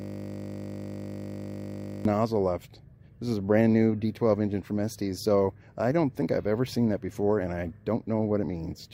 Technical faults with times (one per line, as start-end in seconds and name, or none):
0.00-2.05 system hang loop